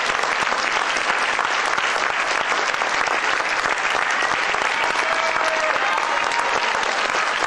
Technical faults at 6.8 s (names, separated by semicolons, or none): none